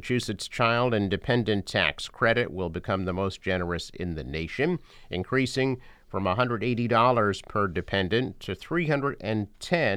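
No technical faults can be heard anywhere in the speech recording, and the signal stays continuous and steady throughout.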